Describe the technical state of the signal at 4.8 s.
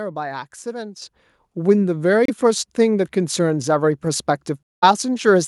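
At 4.8 s the speech has dropped to silence for about 192 ms, from 4.63 to 4.84 s, then resumes: a Bluetooth stall, likely from the headphones' buffer running dry while delayed packets were resent.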